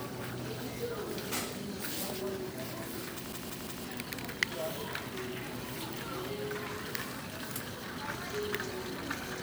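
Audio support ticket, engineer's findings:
CD stuck on one turn, 3.33 to 3.85 s. Same 174 ms slice of sound plays three times, tiny mute at each jump, fast even stutter. Probable component: disc or transport, likely a scratch. Laser knocked back one track at the same spot each revolution, so it keeps rereading that short chunk until it breaks free. Worth checking the source disc or re-ripping that section.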